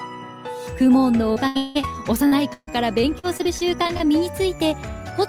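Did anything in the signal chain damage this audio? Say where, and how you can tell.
Yes: choppy, robotic sound from 1.33 to 1.85 s and 2.27 to 4.02 s is repeated packet loss on the network, with gaps patched by stretching earlier sound.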